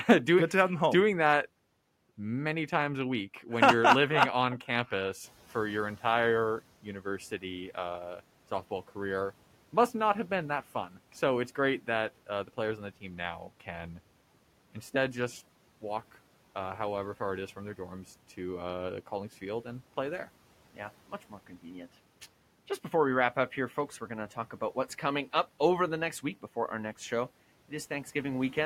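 The noise suppressor mistook parts of the speech for background and pulled them down by about 10 dB, at 6.83 to 7.43 s after "campus for your entire", 10.89 to 11.13 s after "not have been that", and 21.3 to 21.66 s, leaving brief swallowed, faint fragments.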